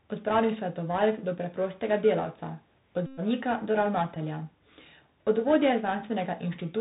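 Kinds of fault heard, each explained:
Bluetooth CVSD headset codec: The speech runs through the narrowband headset codec the whole way, a one-bit up/down scheme at 64 kbps that fits a 64 kHz delta rate. Nothing gets through above 4 kHz, so it sounds boxed-in and dull. The damage is plainly audible here: a grainy hiss sits under the talking, s sounds come out scratchy, and louder bright bits smear where the adaptive step can't keep up.
Bluetooth headset packet repeated: Headset packets dropped and the decoder just replayed the previous packet's bits in their place. The big one runs from about 3.06 to 3.20 s, roughly 112 ms of repeats at a 3.75 ms cycle, so you hear a steady buzz around 267 Hz until clean audio returns. A second, much shorter run near 4.15 s, about 11 ms, comes across as a brief burst of the same buzz.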